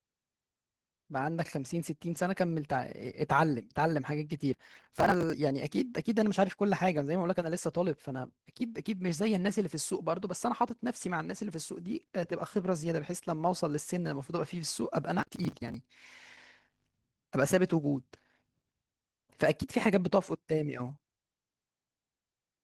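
Throughout, Opus voice compression at 16 kbps runs in hybrid mode, linear-prediction coding below 8 kHz with a transform layer above. The coarse excitation leaves the speech plainly hoarse and slightly robotic. From 4.54 to 5.33 s and again from 15.19 to 15.74 s, processor overload crackle appears. Dozens of missed deadlines, consistent with roughly 10 ms buffers, are skipped outright, producing gritty, hard-edged tearing over the speech.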